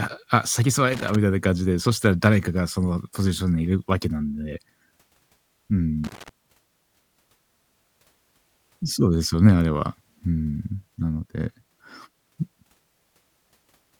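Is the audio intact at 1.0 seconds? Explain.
No. From 0.93 to 1.15 s the speech is broken up by an irregular burst of crackle and scratching. This is loose connector crackle: a worn or dirty contact in the signal path is making and losing connection rapidly as it shifts, so the signal is chopped on and off for about 0.22 s. Any DC present on the line turns those breaks into pops.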